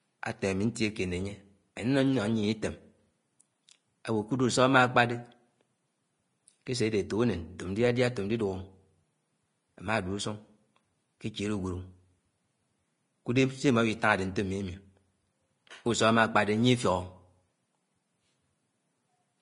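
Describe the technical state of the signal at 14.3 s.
At 14.3 s the speech is hissy and grainy, with a roughened edge on the tones and consonant attacks that smear rather than snap. There's also nothing above 10.6 kHz. That isn't a one-off at this moment; it runs through the whole clip. It's likely Vorbis compression at a low setting, something around 30 kbps. The encoder drops everything above the cut-off and quantises the upper residue so coarsely that fine treble detail turns into noise.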